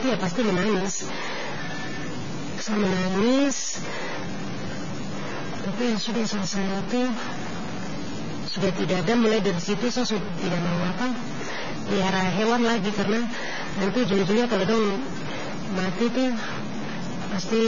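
A data bit likely stuck at one level in the converter or its line adds distortion to the speech from start to finish, with a noise floor filling the pauses. Heavy AAC compression, likely at a bitrate around 16 kbps, removes everything above 7 kHz and leaves the speech dull, smeared and warbly, with fizzy sibilants. From 0.09 s to 17.61 s, periodic USB or driver dropouts skip a few milliseconds of audio every 0.06 s, some 300 times, producing a steady train of ticks.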